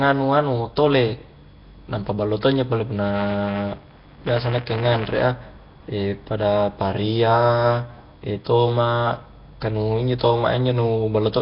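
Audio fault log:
throughout Nellymoser compression: likely a Flash-era Nellymoser Asao encoder at roughly 22 kbps, zeroing weak bands and noise-filling them, leaving hissy, underwater-sounding speech with nothing above 5.3 kHz.
3.02–5.21 s buffer tearing: after "ballo to injo pole", writer and reader collide inside each period, splicing in a small slice of audio some 15 ms stale, giving a rattling 200 Hz buzz.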